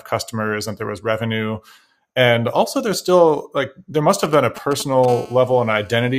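GSM signalling bursts from 4.24 to 5.06 s, right after "still like there must": a nearby 2G phone's radio pulses are rectified in the audio circuit, giving galloping ticks and short 217 Hz buzzes, roughly 15 dB below the speech. GSM phone buzz from 5.08 to 6.14 s: the phone, now in a call, transmits continuously at 217 bursts per second, producing a steady, raspy buzz rich in harmonics, about 23 dB under the speech.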